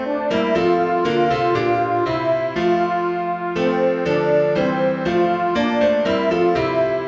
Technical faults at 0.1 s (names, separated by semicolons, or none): none